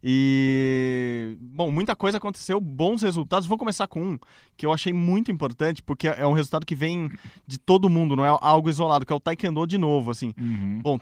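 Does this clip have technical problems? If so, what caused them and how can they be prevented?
No, there's nothing here to fix or guard against, and the Opus voice compression it went through sounds in keeping with the codec's hybrid mode at around 24 kbps with the full band kept.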